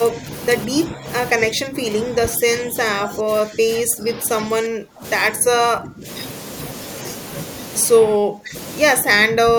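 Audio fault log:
0.12–0.28 s, 0.67–6.06 s, 7.95–8.55 s, 9.01–9.58 s: speech suppressed in double talk. Speech dips in level, by up to about 25 dB. Likely an echo canceller ducking during overlapping talk.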